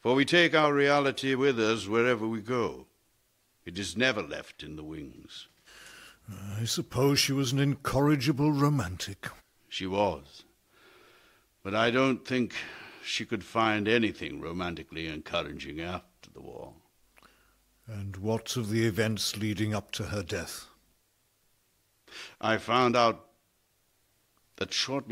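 Nothing in the clip stands out as a technical fault at any point, so there's nothing here to flag.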